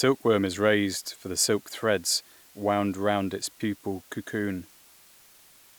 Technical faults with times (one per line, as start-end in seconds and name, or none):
0.00-5.79 low bit depth with dither